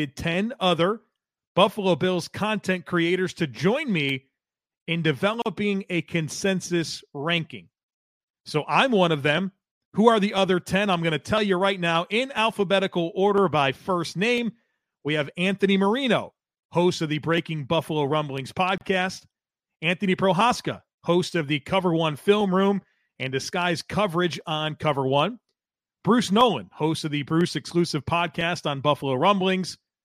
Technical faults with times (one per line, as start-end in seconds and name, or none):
5.42-5.46 gap at a join of encoded pieces
18.78-18.81 gap at a join of encoded pieces